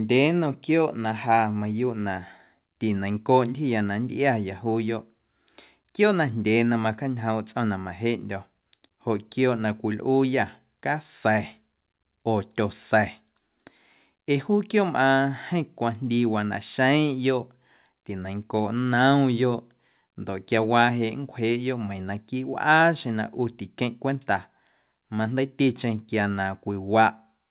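Nothing stood out on listening to this speech, which comes through the call path as expected with its content stopping at about 4 kHz.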